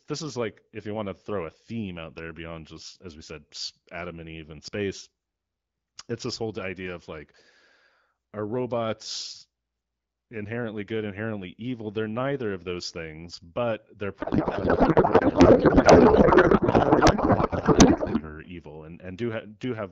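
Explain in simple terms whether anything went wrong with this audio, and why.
Something went wrong from 14.19 to 18.31 s, right after "those things but they're". The speech turns into garbled, warbling noise. This is a codec payload misread. The two ends of the HD Voice link disagreed on how the coded bits were packed, so the decoder read every field from the wrong place.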